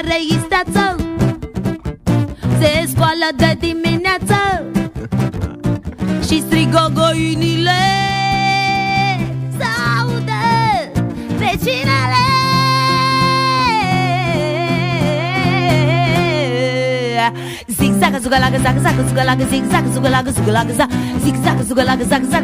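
Nothing in the audio points to a technical fault: the signal holds steady throughout, with no dropouts, distortion, timing glitches or level problems to be heard.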